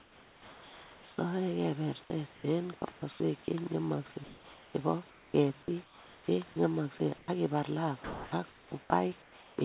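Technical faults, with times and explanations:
0.00–1.18 s, 2.34–3.20 s, 4.24–6.28 s, comfort noise in place of the background: the room hiss turns smooth and featureless, first about 3 dB quieter, likely synthetic fill during discontinuous transmission.
6.98–7.28 s and 8.04–9.58 s, sound chopped by the voice detector: speech breaks up as parts of it are replaced by comfort noise, likely the detector toggling transmission repeatedly.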